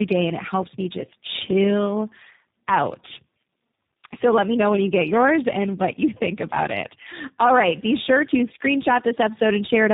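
Throughout the speech, tandem speech coding roughens, muffles and warbles the sound. It seems decoded and re-encoded through about three speech codecs in turn, ending in what fits G.729A, each compounding the last one's errors. A spectrogram shows nothing above 3.8 kHz and smeared, blotchy harmonics.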